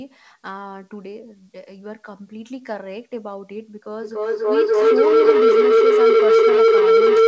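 A speech recording carries a feedback howl. Two devices on the same call in one room formed a loop from loudspeaker back into microphone that gained level on each pass, so the repeats grew instead of dying away. From 4.02 s to the end the sound narrows into a howl near 500 Hz, repeating roughly every 0.3 s and peaking about 15 dB above the speech. The call path's 8 kHz ceiling, consistent with G.722, shapes the top end.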